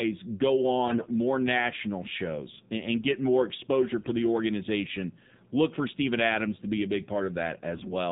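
The whole clip is speech through the AMR narrowband mobile codec. Nothing above 4 kHz survives. The voice sounds buzzy and synthetic, and the codec damage is plainly audible. That thinness fits AMR-NB at a low rate, around 7.4 kbps.

AMR bit errors strike three times. From 0.88 to 1.11 s, just before "national shows and and", the voice turns hoarse and gargly. Between "and get more exposure" and "the organization", at 4.00 to 4.12 s, it scratches briefly. From 7.74 to 7.93 s the gargle is harshest. Flipped low-priority bits misplace the excitation pulses and skew pitch, gain and spectrum. Pitch and level roughly hold.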